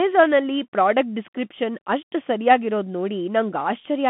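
A short speech clip, heard through the Bluetooth CVSD headset codec for its whole length. The band is narrow, running from about 150 Hz to 3.5 kHz. Nothing above 3.8 kHz survives. The codec damage is plainly audible. CVSD sends a single up-or-down bit per sample, which fits a 64 kbps stream. Its step size adapts but cannot keep pace with fast changes, so the speech comes out coarse and grainy.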